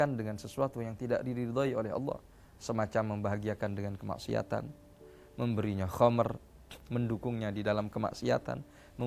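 No technical faults can be heard anywhere in the audio, so there is nothing to describe in time order.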